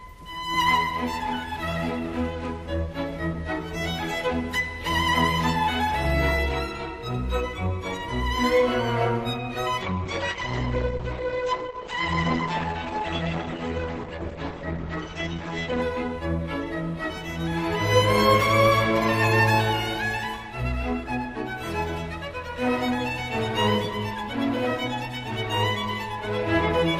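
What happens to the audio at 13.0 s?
At 13.0 s the audio is inside an adaptive stream at a lower bitrate, a stretch running from 9.82 s to 15.82 s. The stream dropped to a leaner version of the same audio, then stepped back up, with no gap at either switch. In between, nothing sounds above 8.7 kHz, the top end turns dull, and coding artefacts thicken. This fits a fall from about 64 kbit/s Opus to roughly 16 kbit/s.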